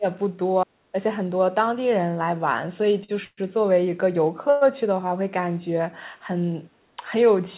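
A speech recording carried over a call path with nothing above 4 kHz, as G.711 narrowband coding would give. Its faults are of three kinds. At the very start, 0 to 0.05 s, the level dips by about 20 dB, and from 0.64 to 0.96 s it falls much further, around 40 dB, for roughly a third of a second. This is likely speech suppressed in double talk by the echo canceller. Unlike the stalls, the timing is untouched: the sound simply sinks in level rather than being held. At 3.04 to 3.10 s a short stall from a late packet holds the last sound for 43 ms, then carries on with nothing lost. It is brief and has no fade or silence, which separates it from a freeze. Two longer gaps are likely call audio freezes from delayed packets. From 3.24 to 3.39 s the last sound is stretched into a fading buzz or hiss for about 130 ms, ending in 40 ms of silence. From 4.50 to 4.63 s a 112 ms fill fades without going fully silent. 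In both, the speech resumes where it stopped.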